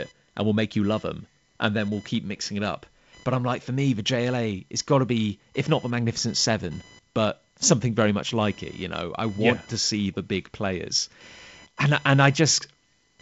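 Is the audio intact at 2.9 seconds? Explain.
No. At 2.9 s the speech carries computer activity noise, which runs through the whole clip rather than starting there. Load changes in the computer's processor, graphics card or mouse disturb the ground shared with the audio circuit, producing a buzzy chirp pulsing at around 1 kHz, roughly 30 dB below the speech. Unlike the light hiss of the G.722 wideband coding, which stops near 7.7 kHz, this buzz follows the machine's activity rather than the speech.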